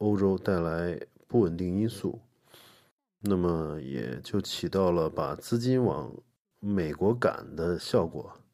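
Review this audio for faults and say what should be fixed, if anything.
Nothing in the speech needs fixing. No faults can be heard anywhere in the recording, so no corrective or preventive step is called for.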